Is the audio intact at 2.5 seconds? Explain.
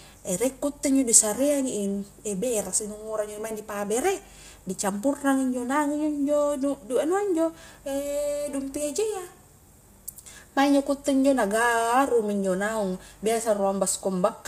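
No, at 2.5 seconds the speech carries the same plainly audible coding damage that runs through the whole clip, likely low-delay AAC compression (AAC-ELD) at a rate that fits around 32 kbps, with nothing above 15.6 kHz. Its low bitrate leaves too few bits for clean speech.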